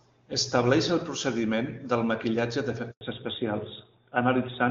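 Right after "el procediment del maquillatge", at 2.91 s, there's a handover gap: the call hops networks and no speech frames get through for 100 ms, so the sound falls away quickly and sits silent until 3.01 s, when the new link picks up.

From 3.01 s to the end it's a fallback to narrowband. The clear HD Voice sound before the gap, which fits AMR-WB at 23.85 kbit/s, gives way to a codec with nothing above 4 kHz, consistent with AMR-NB at 12.2 kbit/s, so the speech turns duller and rougher.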